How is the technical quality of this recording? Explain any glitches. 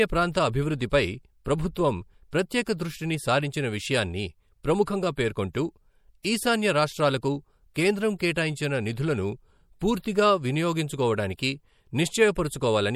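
Technical quality takes a clear hit from lossy coding. You can plainly hear the damage, though nothing is outright broken.

MP3 compression runs through the whole speech clip. The audio has that watery, swirly texture, and sibilants pick up a metallic edge. The bandwidth stops around 20.9 kHz. All of this is likely down to an MP3 encode short on bits, consistent with something like 64 kbps. Weak frequency lines drop in and out between frames, causing the shimmer.

Pre-echo shows up at 4.85, 6.23, 7.74, 8.18 and 11.37 s. Each sharp onset gets a short hiss smeared about 17 to 19 ms ahead of it. The codec spreads quantisation noise across its whole block, so noise meant for the loud attack leaks into the quiet moment just before it, softening the hit.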